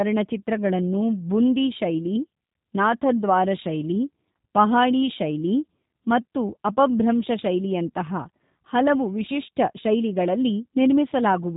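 Speech run through a G.729 codec the whole way, and the damage is plainly audible: slightly rough, synthetic timbre from the model-based rebuild, and nothing above 3.8 kHz, so it sounds dull and narrowband, which fits an 8 kbit/s telephony codec.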